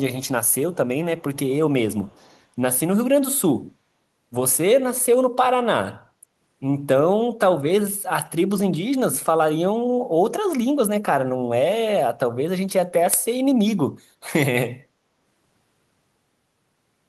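Speech. A very faint copy of the voice follows 239 ms behind at 0.46–0.55 s, 1.21–1.53 s and 1.94–2.41 s. It is likely echo leak, where a far-end speakerphone's echo canceller let some of its microphone pickup through.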